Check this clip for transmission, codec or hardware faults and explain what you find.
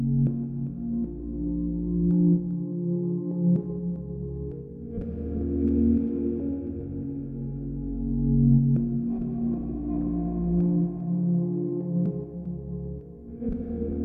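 Nothing stood out on listening to this audio.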